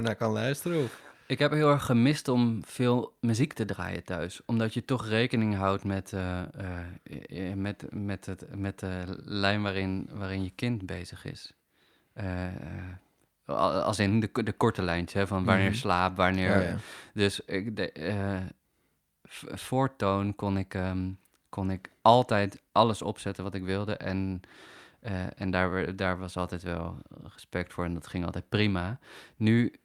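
Nothing stood out on listening to this speech recording.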